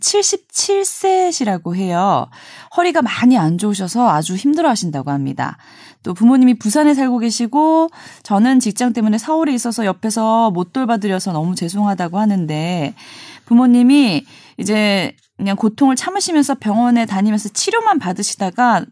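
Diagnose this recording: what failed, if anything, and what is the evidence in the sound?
Nothing failed; no fault is audible in the speech.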